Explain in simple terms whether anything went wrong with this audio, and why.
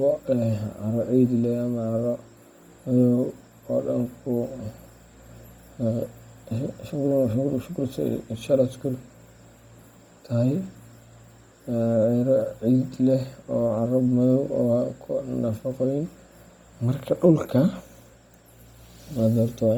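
Bluetooth LC3 compression damage runs through the whole speech clip, from start to finish. The speech sounds breathy and grainy, with a rough, hissy edge on the upper sounds. This is likely the work of LC3, the codec Bluetooth LE Audio uses to squeeze sound into short 10 ms slices. Squeezed this hard, it throws away much of the fine high detail and patches the gaps with noise, which is the graininess you hear.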